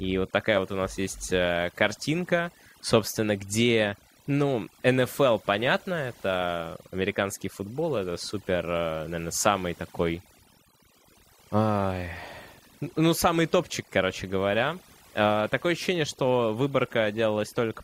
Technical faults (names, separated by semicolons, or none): overdone noise removal